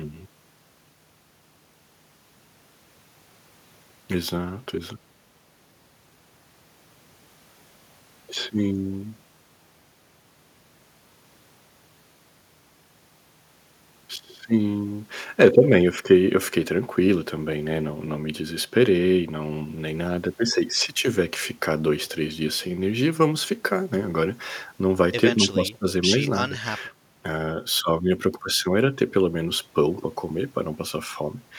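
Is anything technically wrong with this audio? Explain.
No, nothing technically wrong can be heard here.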